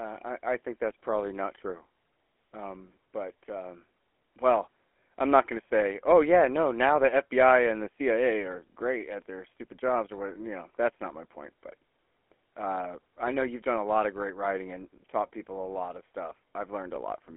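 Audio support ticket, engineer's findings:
GSM full-rate codec across the whole clip. Buzzy, gravelly speech, band squeezed to 300 Hz–3.4 kHz, nothing above 3.8 kHz. Pulse-driven vocal-tract model dropping most excitation detail, which fits a 13 kbps GSM full-rate leg. Damage plainly audible throughout.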